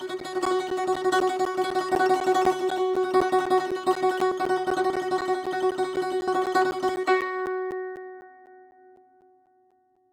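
From 0.20 s to 9.97 s the music is broken by periodic USB or driver dropouts, one every 0.25 s. Each time, something stalls the USB link or audio driver and about 10 ms of signal is lost and replaced by silence. Around forty gaps sit on this steady quarter-second grid. Each gap is heard as a regular tick or pop riding on the music, and the strict timing gives the fault away.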